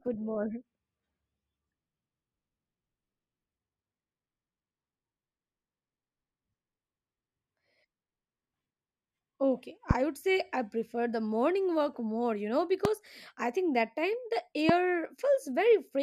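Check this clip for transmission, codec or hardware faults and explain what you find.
Three loud pops interrupt the speech. A voltage spike, likely from a plug, switch, static discharge or driver glitch, was added to the signal at 9.91–9.93, 12.85–12.87 and 14.69–14.72 s. Each is a single sharp pop, about 20 dB above the speech, which continues underneath.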